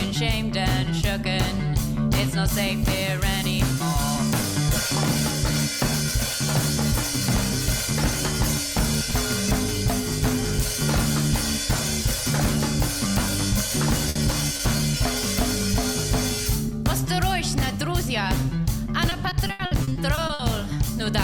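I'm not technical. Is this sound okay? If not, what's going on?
No, there are three kinds of problem, all from parts of the sound failing to arrive in time.

Burst of packet loss, at 14.09 to 14.17 s: a chunk of the sound went missing in transit. The receiving end covered the hole by stretching out the last bit it had for about 60 ms, fading it as it went, so you hear a held buzz or fading hiss. When the sound comes back, it picks up further along, with about 60 ms of the original skipped.

Short concealed packet loss, at 14.57 to 14.61 s and again at 14.77 to 14.81 s: two much smaller pieces, about 20 ms each, didn't arrive. Each time the receiver briefly continued the previous sound to fill the hole, then blended back into the real audio. These come across as a quick smear or wobble, and a very short sound can drop out entirely.

Repeated packet loss (robotic sound), from 19.09 to 20.41 s: here the losses keep coming, with 11 separate holes in just over a second, the longest about 80 ms. 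Each one is patched by continuing the last sound, but the next hole arrives before things recover. Nearly a third of that stretch is filler rather than real audio, so it sounds choppy, with pieces missing.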